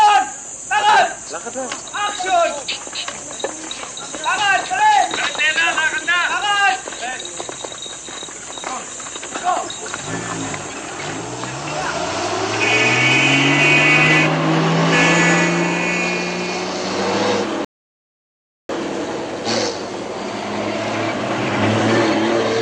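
At 17.65 s the audio stops dead and stays silent until 18.69 s, a rebuffering stall: playback used up its downloaded data and waited for more, adding about 1.04 s of dead air. When it resumes, the sound picks up exactly where it broke off, with nothing skipped. On a waveform this appears as a flat line inserted into the signal. A spectrogram shows an empty vertical band, with matching content on either side.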